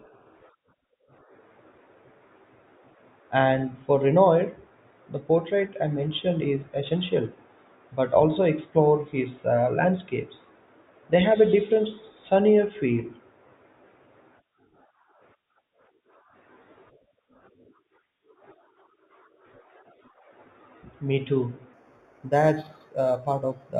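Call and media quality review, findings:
Imaging from linear upsampling, 21.73–23.8 s. Speech turns dull at the top, with a faint metallic shimmer on sibilants. Probable component: sample-rate converter using straight-line interpolation, which fits a rise from an 8 kHz path to 44.1 kHz. Weak filtering leaves a mirrored spectrum image around 4–8 kHz, roughly 35 dB below the speech.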